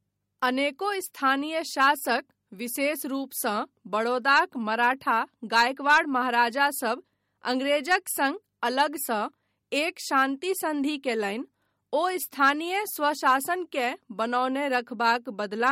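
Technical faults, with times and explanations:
Throughout, MP3 compression: the speech swirls and sounds watery, attacks smear, and nothing remains above 16.5 kHz. The likely cause is a bit-starved MP3 encode, consistent with about 48 kbps, dropping weak frequency lines frame by frame. A plain low-pass filter would not swirl.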